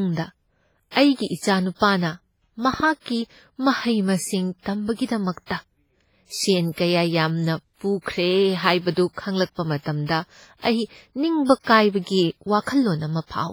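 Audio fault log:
Throughout: WMA compression, heavy codec damage, with ringing, washy speech and hiss breathing with the signal, likely from a low-bitrate transform codec near 24 kbps.
2.74–2.82 s: loud pop, two sharp pops riding about 5 dB above the speech, which continues underneath, likely from a voltage step like a plug or switch.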